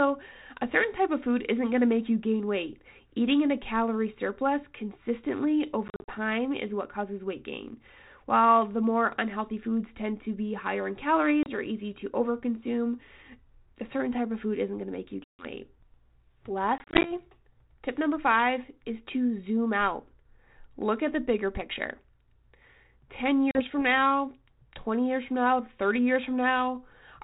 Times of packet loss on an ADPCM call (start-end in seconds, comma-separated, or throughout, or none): 5.88-6.18, 11.43-11.58, 15.24-15.45, 16.78-17.12, 23.51-23.62